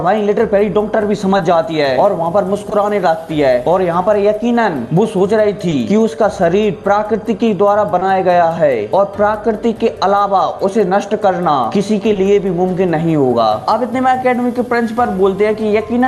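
Short concealed packet loss occurs five times, at 1.37, 2.69, 5.69, 7.99 and 12.13 s. Each time about 20 ms of audio arrived too late, and the receiver extended the preceding sound to fill it before crossfading back, giving a brief smear or wobble. On a spectrogram each shows as a short stretch where the preceding sound is carried on. The 12 kHz band ceiling points to Opus on the call path.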